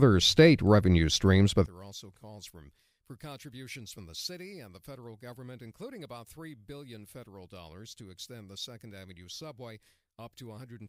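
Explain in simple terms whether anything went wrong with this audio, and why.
One of the two stereo channels has likely been flipped upside down (one channel inverted), so when both are combined the shared speech cancels itself. From 1.66 s, right after "state revenue streams but", the voice suddenly drops to a faint whisper until the end.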